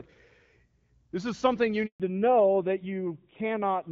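A handover gap runs from 1.86 to 2.00 s: the speech cuts out for 140 ms while the call switches networks, and nothing spoken during the switch survives. A fallback to narrowband follows at 2.00 s and lasts to the end. Before it, the audio carries the clear top end of HD Voice, consistent with AMR-WB around 12.65 kbit/s. After it, everything above 4 kHz is gone, and the speech sounds duller and rougher, which fits a drop to a narrowband AMR mode near 7.4 kbit/s.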